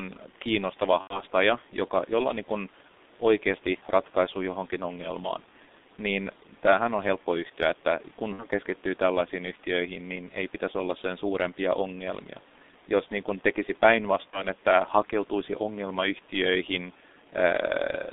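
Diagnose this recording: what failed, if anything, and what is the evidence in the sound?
The codec stage is the culprit throughout: the whole speech track has the muffled, hoarse character of the G.723.1 codec. Nothing gets through below about 200 Hz or above about 3.7 kHz, consonants smear, and the voice quality shifts sluggishly, which fits its roughly 6.3 kbit/s mode and 30 ms frames. Compression damage is heavy, and the room noise sits about 26 dB under the speech.

On the network side, there's VoIP packet loss concealed by the speech codec at three spots: 1.01 to 1.22 s, 8.33 to 8.46 s, and 14.30 to 14.42 s. Each time the decoder runs out of data, keeps repeating its last pitch and filter, and turns the sound into a buzzy tone or coloured noise that fades before it recovers. The gaps of about 90, 60 and 30 ms point to three, two and one lost 30 ms frames.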